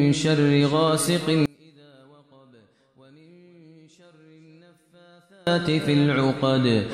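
From 1.46 to 5.47 s the sound collapses by about 32 dB into a faint residue, likely from one channel inverted, so shared content cancels in the mono sum. The waveform shrinks to a sliver; the spectrogram fades.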